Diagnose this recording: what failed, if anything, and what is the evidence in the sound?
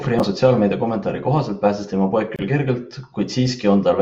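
The fault sits at the codec stage: a gap at a join of encoded pieces. After "kohaselt pääses tema poeg", the speech drops out from 2.36 to 2.39 s, a gap of about 27 ms. Its edges are smeared by the codec. The speech then resumes at "küll kergelt" exactly where it stopped. The pieces were encoded separately and spliced untrimmed. The encoder's start-up delay and last-frame padding both remained, leaving that short hole.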